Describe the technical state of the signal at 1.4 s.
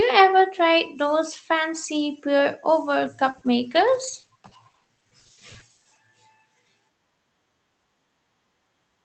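At 1.4 s the speech is intact, with no dropout, glitch or distortion, only the band-limited sound of the WebRTC call path's codec, which passes nothing above about 8 kHz.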